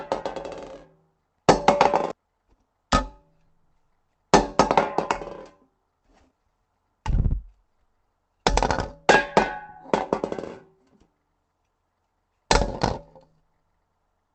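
A recording of everyday sounds, carried over a call link whose upper range stops near 8 kHz, consistent with the Opus codec at a modest bitrate. At about 2.11 s the sound jumps forward with no gap, losing roughly a second of material. This skip ahead happened because that stretch was dropped, in transit or when an overfull jitter buffer discarded it, while later audio was already queued, so the two sides are spliced almost directly. Right after, from 2.21 to 4.32 s, the sound plays about 6% fast at unchanged pitch, and again from 5.69 to 6.71 s at about 8% fast. It feels slightly rushed. This is jitter buffer speed-up. The receiver was holding more audio than its target and trimmed short pitch-period slices repeatedly to shed the excess delay, removing roughly 150 ms in the first stretch and around 70 ms in the second.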